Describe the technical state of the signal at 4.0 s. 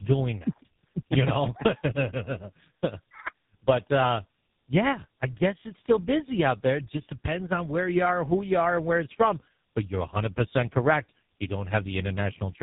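At 4.0 s the speech carries tandem speech coding, present throughout. It sounds like two low-rate speech codecs in a row, fitting AMR-NB then GSM full rate, the second re-coding the first's losses. The result is rough, muffled, warbly speech with nothing above 3.8 kHz.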